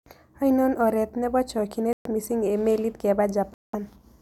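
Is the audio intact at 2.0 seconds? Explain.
No. A Bluetooth stall breaks the speech from 1.93 to 2.07 s. The sound cuts to silence for 124 ms, then resumes just before "miising' eng' meliit". Radio interference likely delayed packets, so the headphones' buffer ran empty and playback paused.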